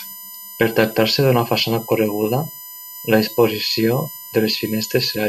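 Speech runs over a continuous USB whine lasting the whole clip: a fixed-pitch tone based on 1 kHz with a ladder of harmonics above it, the strongest at 13 kHz, sitting roughly 15 dB below the speech. The 1 kHz spacing matches the bus's 1 ms frame rate. Current drawn in those bursts modulates the power or ground shared with the audio path, coupling the frame rhythm into the signal as a steady tone.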